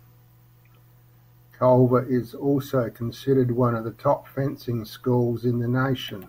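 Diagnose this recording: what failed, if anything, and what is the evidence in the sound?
Nothing failed: the sound gives no evidence of a fault at any stage of the recording chain.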